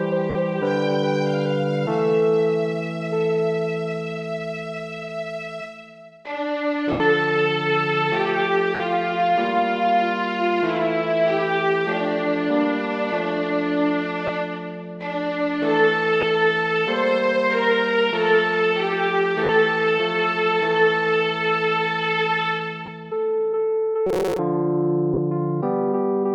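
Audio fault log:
0.30, 6.92, 8.75, 14.27, 16.21, 19.44, 22.86 and 25.14 s, lost LE Audio frames: brief gaps of 50, 80, 50, 20, 20, 50, 20 and 40 ms where the sound becomes a noisy smear instead of a clean continuation. The Bluetooth link dropped LC3 frames, and the decoder filled each hole by replaying the last spectrum with random phase signs. The gap lengths fit a 10 ms frame size.
24.07–24.39 s, robotic sound from repeated short buffers: for about a third of a second the audio turns into a rigid, metallic buzz at 188 Hz that roughly keeps the shape of the sound underneath. This is likely caused by playback starving for new data and repeatedly looping a very short buffer, which would be about 5.3 ms long at that buzz rate. Roughly half of the audio in that stretch is repeated material.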